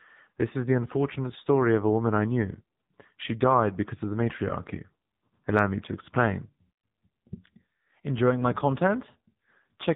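Speech runs through the AMR narrowband mobile codec for the whole clip. Nothing above 3.8 kHz survives, and the voice has a heavily buzzy, synthetic quality, which fits one of AMR-NB's low modes, around 6.7 kbps. The codec rebuilds speech from a vocal tract model fed by a pitch predictor and a few pulses per 5 ms. A plain telephone band limit or simple low-pass would dull the top end without making the voice sound artificially rebuilt.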